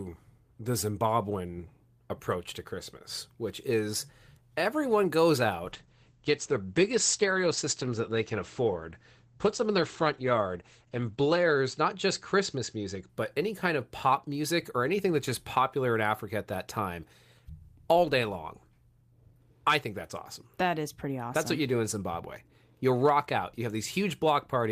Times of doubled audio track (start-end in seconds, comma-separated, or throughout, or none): none